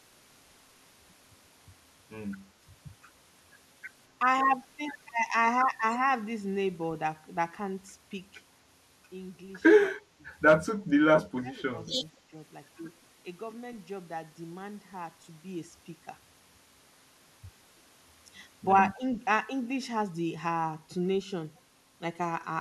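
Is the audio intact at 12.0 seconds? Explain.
No. Between 11.94 and 12.00 s, the speech is suppressed in double talk, likely because the echo canceller mistook the near talker for loudspeaker echo while both sides spoke and attenuated it. The speech briefly dips by around 10 dB, chopping a few tens of milliseconds.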